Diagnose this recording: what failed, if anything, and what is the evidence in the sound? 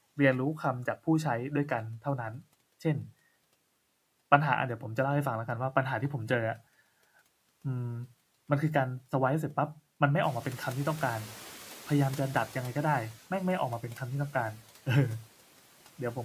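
Call processing failed: the noise suppressor catching up. Room noise jumps by about 14 dB near 10 s. From 10.23 to 13.13 s it passes with less reduction, then sinks by about 8 dB. The suppressor's noise estimate took 2.9 s to follow the rise.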